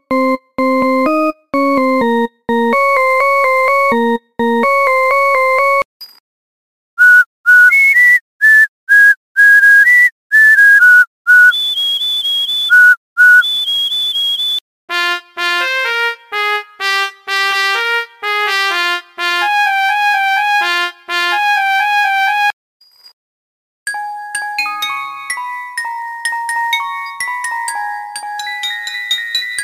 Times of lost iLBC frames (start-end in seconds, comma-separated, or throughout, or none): none